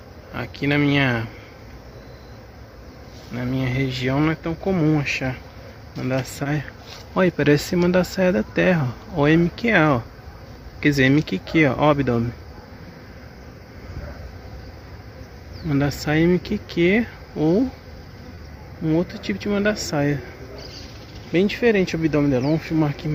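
At 6.43 s there is a short concealed packet loss. About 20 ms of audio failed to reach the decoder in time. The receiver filled the gap by extending the sound just before it, then blended back into the real signal. It comes across as a brief smear or wobble. The same fault returns at 18.35 s, again a 20 ms hole patched the same way, with the same brief blur.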